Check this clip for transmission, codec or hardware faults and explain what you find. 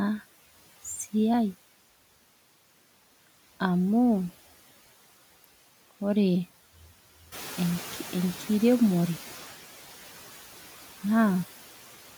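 There are two faults here, both from the noise suppressor, not the line or the hardware.

Noise suppressor artifacts throughout: the suppressor pulls its noise bands down by about 10 dB frame by frame, so the background dips between phrases and swells under the speech.

Noise suppressor catching up, 7.32 to 9.46 s: the room noise jumps by about 11 dB, the suppressor's noise estimate lags, and the noise pushes through louder for about 2.1 s before settling back down as it adapts.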